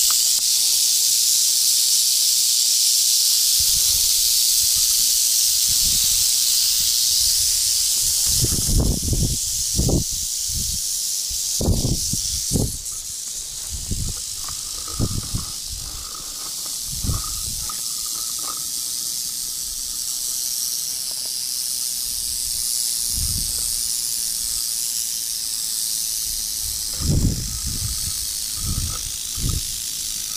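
Nothing stood out as a technical fault on listening to the recording.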